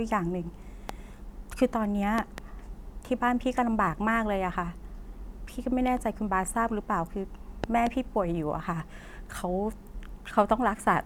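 A loud pop hits at 0.89 to 0.91 s, then double pops at 2.18 to 2.40 s and 7.64 to 7.89 s, jumping well above the speech: likely voltage spikes from a plug or switch.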